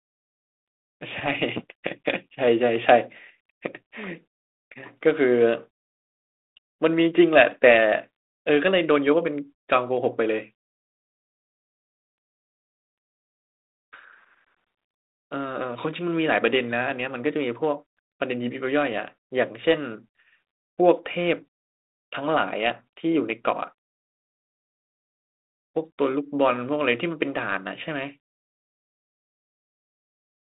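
From 1.13 s to 1.31 s the speech is hit by bit errors on an ADPCM link, here the 32 kbit/s G.726 path with its telephone band of 250 Hz to 3.7 kHz. At an error rate of roughly one or two bits per thousand, each corrupted bit throws off the decoder's step size and predictor, so the damage rings on briefly. This is heard as a short cluster of pops and rough, gritty bursts, with the level jumping briefly.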